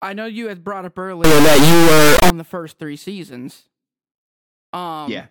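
From 1.24 s to 2.30 s, just after "you had brought up" and before "the first three seasons", the speech gives way to an integer read as float fault: 32-bit integer samples are read as 32-bit floats, so most values land near zero or far beyond full scale. The result is a harsh, extremely loud square-wave buzz slamming between silence and the clipping limit. Unlike ordinary clipping, no flattened trace of the original waveform survives.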